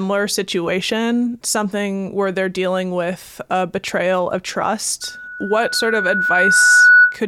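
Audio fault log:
5.01–7.19 s, loudspeaker feedback squeal: right after "with a betrayal of", a single 1.5 kHz tone swells over roughly two seconds to about 10 dB above the speech. The microphone-loudspeaker loop is reinforcing its own output at that frequency, so unlike a steady hum or whine, it grows on its own.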